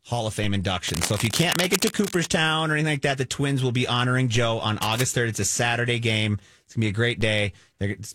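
At 0.44 s there's a DC step: the waveform's zero line jumps by about -24 dBFS and then creeps back as a 2 Hz high-pass drains it, which you hear as a low thump under the speech. From 0.88 to 2.26 s, cable scratch noise rustles over the speech at nearly the same level, likely a worn connector or cable being moved. There's another thump at 4.36 s, then a shorter, quieter scratch from 4.82 to 5.01 s, and a final thump at 7.21 s.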